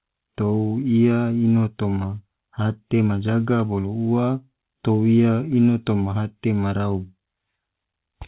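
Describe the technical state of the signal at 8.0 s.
At 8.0 s the speech is intact with no fault, carried through the call path's telephone-band codec, so nothing is heard above about 4 kHz.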